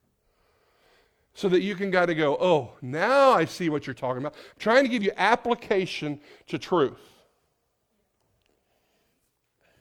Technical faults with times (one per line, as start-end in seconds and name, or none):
none